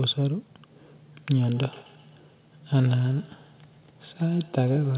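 Feedback echo between two devices starts at 1.52 s and runs to the end. A second device replays the call audio, and its microphone recaptures it beyond either echo canceller's reach. The speech returns roughly every 150 ms, thin and ringing, about 23 dB below the speech.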